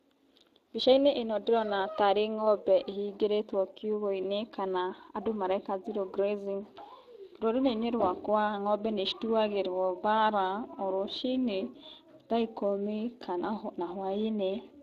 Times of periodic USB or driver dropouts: none

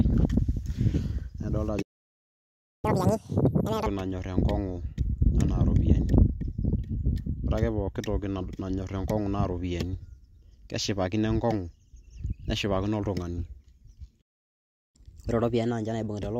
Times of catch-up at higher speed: 2.85-3.86, 14.96-16.39

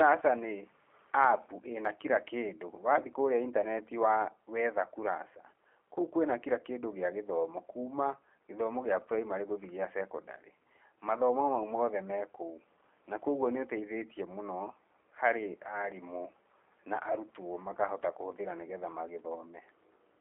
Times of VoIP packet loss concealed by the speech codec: 3.61-3.64, 17.12-17.18

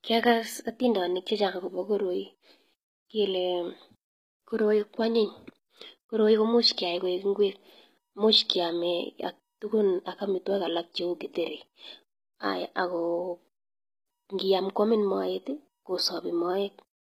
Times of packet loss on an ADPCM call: none

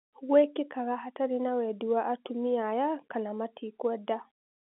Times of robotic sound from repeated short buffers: none

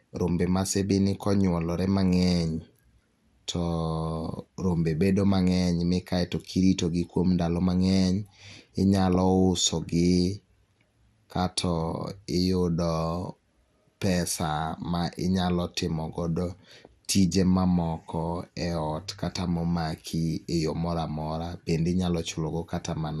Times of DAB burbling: 9.15

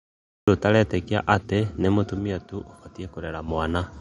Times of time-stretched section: none

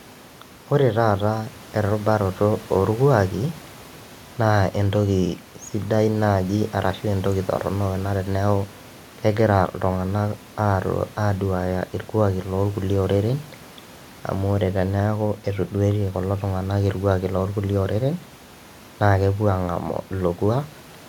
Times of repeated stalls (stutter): none

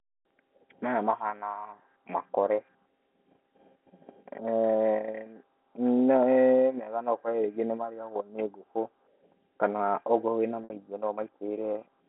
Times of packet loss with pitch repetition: 10.64-10.70

